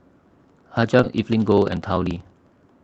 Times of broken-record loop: none

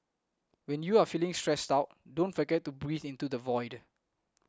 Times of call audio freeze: none

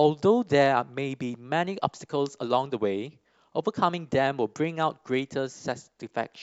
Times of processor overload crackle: none

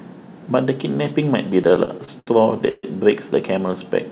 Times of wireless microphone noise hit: 1.01-1.12

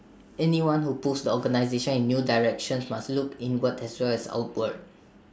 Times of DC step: none

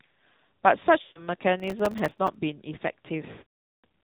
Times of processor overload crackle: 1.60-2.35

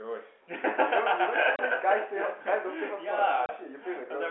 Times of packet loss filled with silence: 1.56-1.59, 3.46-3.49

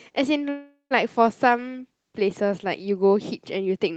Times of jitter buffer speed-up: none

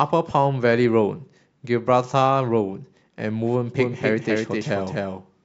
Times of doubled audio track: 3.79-5.44

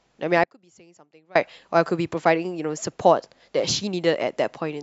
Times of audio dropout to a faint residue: 0.44-1.35

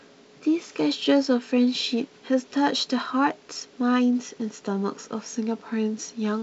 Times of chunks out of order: none

